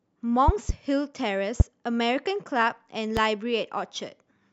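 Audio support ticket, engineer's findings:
Loud pops on speech, three events: double pop at 0.48–0.72 s, single pops at 1.60–1.63 s and 3.17–3.20 s, roughly 20, 20 and 15 dB above the voice. Likely a voltage spike from a connector, switch or static, added on top; speech carries on underneath.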